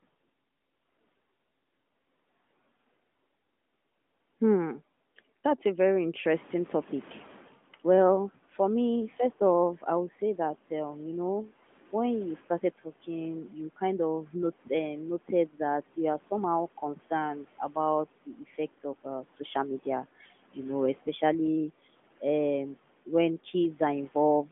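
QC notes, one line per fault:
6.34–7.61 s, noise suppressor catching up: right after "a very" the room noise jumps by about 14 dB around 6.5 s, and the suppressor's noise estimate is still tuned to the quieter floor, so the noise pushes through with less reduction at first. Over about 1.27 s the estimate catches up and the noise sinks by about 10 dB, giving that audible swell-then-fade behind the speech, heard through the narrowband phone line's 3.7 kHz ceiling.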